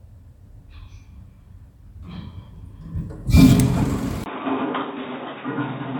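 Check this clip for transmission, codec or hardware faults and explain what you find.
Two kinds of fault are audible: brief stream corruption and a late drop in bandwidth.

Damaged data in a compressed stream at 0.72 s and 3.82 s: the decoder loses frame sync, giving short blips, seen as narrow vertical smears on a spectrogram.

From 4.24 s, after a 20 ms gap, the sound turns dull and quieter. This is likely the input switched to a poorer device. Nothing appears above 3.8 kHz, and new background noise sits roughly 30 dB down.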